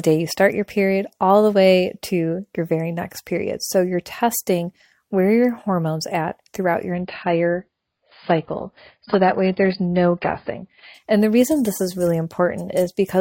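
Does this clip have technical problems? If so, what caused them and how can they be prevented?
Yes. From 6.94 to 10.94 s the connection slowed, so the adaptive stream switched abruptly to a lower bitrate, cutting everything above 5.1 kHz. That sounds like AAC dropping from 96 to 16 kbit/s. A steadier connection or a higher bitrate floor in the player would prevent it.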